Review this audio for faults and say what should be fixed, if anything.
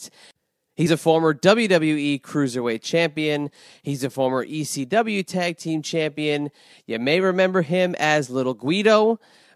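At 0.85 s, just before "a former", the speech jumps ahead. This is compressed frames skipped. About one frame of the encoded audio never reached the output, either missing from the file or rejected by the decoder as damaged. The gap is roughly 30 ms, which fits a frame length of about 26 ms. Re-encode from an intact source and verify the file's integrity before delivery.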